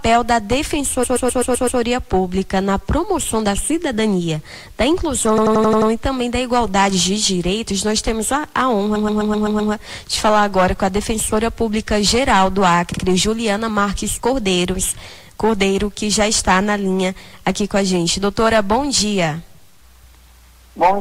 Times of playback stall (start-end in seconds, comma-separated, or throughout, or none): none